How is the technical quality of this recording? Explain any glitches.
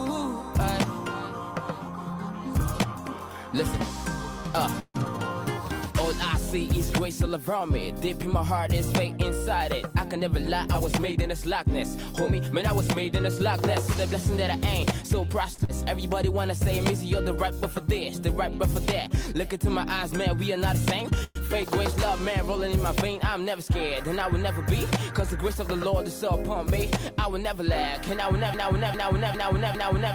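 The recording has several delivery glitches typical of a network call, clustered around the middle and ending in a repeating loop.

Call audio freeze at 4.79–4.96 s and 21.24–21.37 s. These are likely caused by packets held up in transit, which left the jitter buffer empty. The receiver extended the last sound as a fading buzz for about 148 ms and then 114 ms, dropping briefly to silence (about 40 ms and 10 ms) before resuming where it stopped. On a waveform this looks like a decaying smear with a flat dip. A spectrogram shows smeared, stationary bands.

Jitter buffer speed-up from 10.16 to 15.49 s, and again from 23.37 to 24.48 s. The buffer held excess audio, so the receiver repeatedly cut out pitch-period-sized slivers. That trimmed about a tenth of a second in the first stretch and about 50 ms in the second, making the sound run 2% and then 4% faster at unchanged pitch. The waveform shows no obvious marks, only slightly compressed timing.

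Short stall from a late packet at 15.55–15.60 s. One packet arrived late, so the last sound was stretched for 37 ms before playback continued, with nothing lost. It sounds like a slightly held, faintly buzzy moment. A spectrogram shows a brief horizontal streak of frozen harmonics.

Short concealed packet loss at 15.64–15.71 s. About 60 ms of audio never arrived in time. The gap was bridged with 42 ms of synthesized continuation that blends back into the real signal. It is heard as a quick smear or wobble. The spectrogram shows a blurred patch with a faint seam where real audio resumes.

Broken-record loop from 28.54 s to the end. This is likely a stalled stream resending its last buffered fragment. A piece of about 403 ms repeats back to back four times, replacing the audio that should have played. The waveform shows identical blocks tiled in sequence, and the spectrogram shows a visibly periodic pattern.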